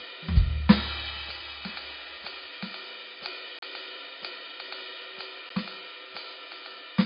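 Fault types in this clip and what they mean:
MP3 compression: The music sounds dull and watery, with nothing above 5 kHz and plainly audible swirling where faint frequency lines drop in and out between frames. This is likely heavy MP3 encoding at a very low bitrate, roughly 25 kbps.
Block of digital silence: The music cuts abruptly to dead silence and back: a 35 ms hole at 3.59 to 3.62 s and a 12 ms tick at 5.50 s. This likely happened because the output buffer wasn't filled in time, and the second gap fits a 512-sample buffer.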